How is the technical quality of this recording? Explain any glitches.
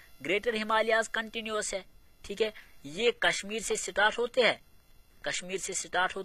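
The recording has one fault, a drop to a lower-bitrate adaptive stream, which runs from 2.44 s to the end.

Adaptive stream at a lower bitrate, 2.44 s onward: the player switched to a leaner encoding when the connection slowed, and the change is consistent with going from roughly 96 kbit/s AAC to a 20 kbit/s HE-AAC stream. The switch is abrupt but gapless. From that point the treble loses its natural detail and takes on a synthetic, reconstructed quality, with nothing above 14.9 kHz, and codec artefacts grow.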